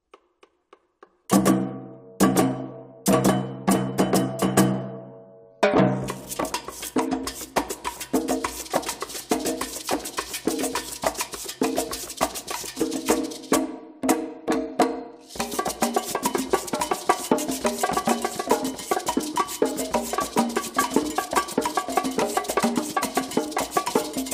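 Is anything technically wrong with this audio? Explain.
No, the signal holds steady and intact throughout, with nothing technically amiss at any point.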